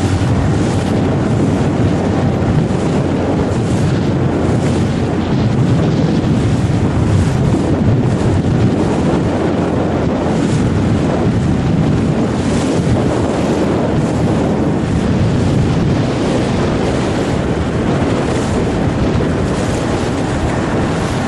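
Nothing technical stands out here; the audio runs along without any dropout, glitch or other problem worth flagging at any point.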